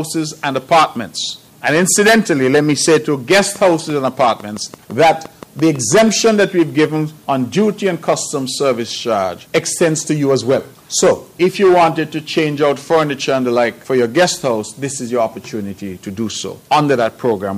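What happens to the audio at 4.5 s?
A train of clicks runs from 3.56 to 6.10 s: about fifteen near-identical pops, evenly spaced at 5.9 per second, likely from electrical interference, unlike random crackle.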